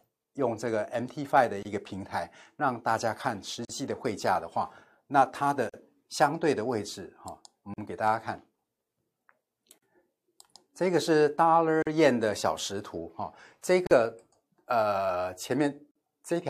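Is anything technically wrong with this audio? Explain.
Yes. The speech has a gap at a join of encoded pieces, repeating every 2.0 s: at 1.63 s (about 24 ms), then at 3.65, 5.69, 7.74, 9.78, 11.82, 13.87 and 15.91 s (about 43 ms each). The audio was encoded in 2-second segments and concatenated untrimmed, so each join keeps the encoder's leading delay and final-frame padding. Each join is a short dropout, its edges smeared by the codec, before the speech resumes where it stopped.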